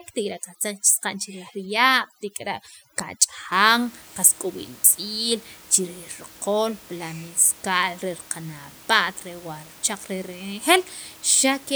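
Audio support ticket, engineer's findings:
Overdone noise removal, 0.00–3.52 s: background drops, breaks into twinkling specks. Noise reducer set too strong, cutting bands near its noise estimate, quiet speech detail included. Unlike codec smearing, ends at 3.52 s; room noise (about 24 dB down) audible after.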